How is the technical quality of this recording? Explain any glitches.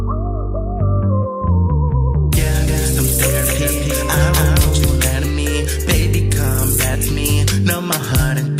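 The recording has one glitch. From 2.68 to 5.08 s there is a doubled audio track, likely from the same signal being captured a second time along a slower path. A full-band copy trails roughly a third of a second behind, about 5 dB quieter, with no decay or room colour, and it cuts in and out abruptly.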